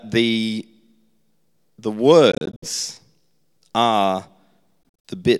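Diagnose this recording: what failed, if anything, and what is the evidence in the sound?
The speech breaks up twice, from 2.32 to 2.68 s and from 4.83 to 5.10 s. Each stretch holds short silences, the longest 61 ms and 46 ms. Speech resumes as if it had played on. This is likely a Bluetooth dropout in playback.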